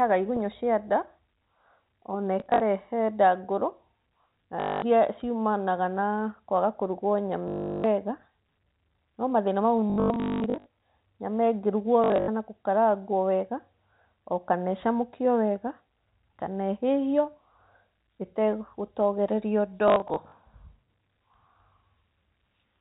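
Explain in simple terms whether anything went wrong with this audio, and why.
Yes. Short robotic stutters and blips interrupt the speech at 2.4–2.6, 4.6–4.82, 7.48–7.84, 9.9–10.66 (the longest, ending just before "nyama ĩngĩrugwo"), 12.04–12.28 and 19.88–20.32 seconds. This is packet loss with last packet repeated. Chunks of audio never arrived, so the receiver replayed the last good chunk to fill the gap. Back-to-back repeats buzz at a steady rate that fits 20 ms chunks. The telephone-quality G.711 coding keeps the sound narrow and muffled, as phone calls normally are.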